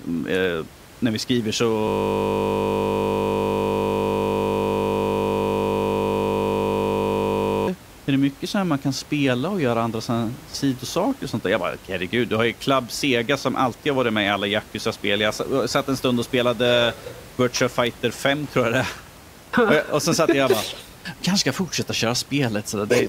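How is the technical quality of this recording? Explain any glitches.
Two glitches occur, a long stretch of looped audio and a later spell of radio ticking, over a room-noise floor sitting about 22 dB below the speech.

From 1.88 to 7.68 s, right after "eh när vi skriver", there is a system hang loop. The system stalled while the audio hardware kept replaying one 20 ms slice of its ring buffer hundreds of times. That produces a steady 50 Hz buzz until playback resumes at "är det mycket så".

From 18.11 to 21.23 s, ending just before "kanske ska fortsätta", there is Wi-Fi interference. A nearby Wi-Fi radio's beacon, repeating every 102.4 ms, is being rectified by the audio circuitry. It produces a regular tick about ten times per second, roughly 30 dB below the speech.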